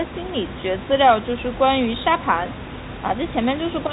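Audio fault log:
There is no fault.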